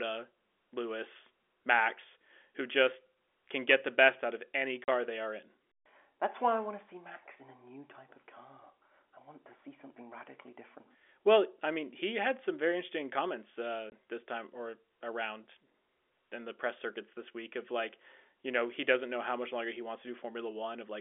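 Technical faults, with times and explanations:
4.84–4.88 s and 13.90–13.92 s, packet loss filled with silence: after "best out of any" a 40 ms hole opens, and after "some very interesting comments" a 20 ms one. Both gaps fit lost 20 ms packets replaced by digital silence, whose edges are abrupt against the narrow telephone-band sound.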